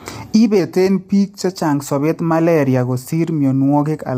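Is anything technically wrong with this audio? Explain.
Yes. Throughout, the speech sounds rough and grainy, with noise between harmonics and a thin top band, likely from low-delay AAC compression whose short frames resolve pitch poorly, consistent with roughly 32 kbps. From 0.60 to 1.50 s, just before "sobeet malaria", speed drops about 6.2% and pitch about 111 cents, roughly a semitone, then snaps back. This is likely a drift correction step, where clock-matching software changed the playback rate to rebalance its buffer.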